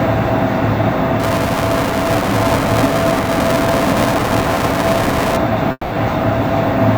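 From 1.20 to 5.37 s, buffer tearing adds a 375 Hz robotic buzz, which fits a 128-sample buffer. Each period repeats a portion of audio roughly 10 ms old, visible as evenly spaced vertical seams in the waveform and spectrogram.

At 5.71 s the sound turns into a fading buzzy continuation for 200 ms, then about 30 ms of silence, before resuming at 5.95 s without the lost material. The spectrogram shows a smeared, decaying band followed by a blank gap. A long network dropout is the likely cause.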